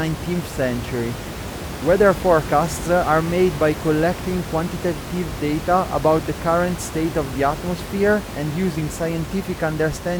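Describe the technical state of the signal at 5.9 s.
At 5.9 s the signal is intact, with only the room's own background noise sitting about 10 dB below the speech as part of the recording.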